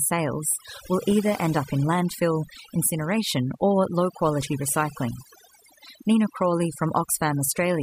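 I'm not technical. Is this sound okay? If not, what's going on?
No. Throughout the clip this speech shows overdone noise removal: a noise reduction tool was set too aggressively, so it turns down single frequency bands it mistakes for background noise, taking quiet parts of the voice with them. The background drops and breaks up into twinkling, warbling specks.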